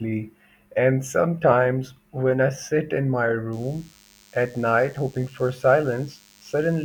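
DECT cordless phone buzz from 3.53 s to the end, after "I sit in my": 10 ms radio bursts rectified into a faint, thin 100 Hz buzz well below the speech.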